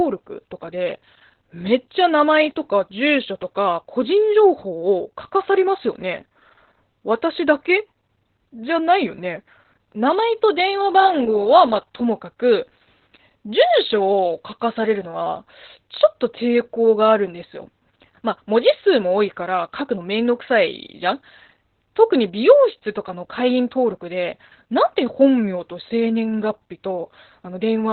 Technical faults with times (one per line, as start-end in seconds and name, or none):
0.00-27.92 Opus voice compression